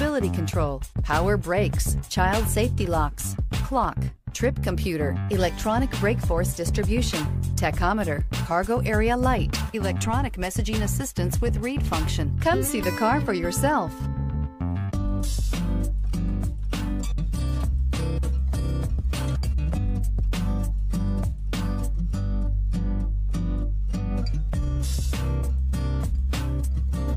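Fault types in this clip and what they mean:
No technical faults can be heard anywhere in this audio. There is nothing here to list or explain.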